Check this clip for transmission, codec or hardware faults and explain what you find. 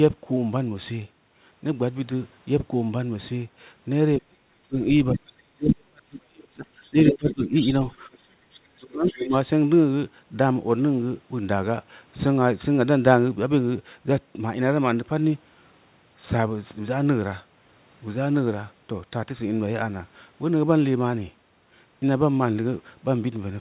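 Two echo-canceller faults run through the middle of the clip, between about 4.2 and 9.4 s. The whole clip is band-limited to nothing above 4 kHz, which fits a G.711 mu-law call path at 64 kbps.

Speech suppressed in double talk, at 4.19–4.76 s, 5.12–7.73 s, 8.23–8.46 s and 8.77–9.34 s. The talker's speech sinks or breaks into pieces, by up to around 35 dB in the first three spans and around 25 dB in the last. About two seconds of the long middle span are hit. The likely cause is an echo canceller that cannot tell the talker from the loudspeaker echo while both sides speak, so it turns both down.

The other side's voice leaking through, as short scraps at 5.13–5.19 s and 5.67–5.73 s and as a longer stretch from 6.82 to 9.43 s. The first scrap and the long stretch sit roughly 10 dB under the talker. The 5.67 s scrap is about as loud as the talker. This leakage likely comes from the far end's loudspeaker playback reaching the microphone and not being fully cancelled. 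It overlaps the suppression gaps, so the dips and the intruding voice arrive together.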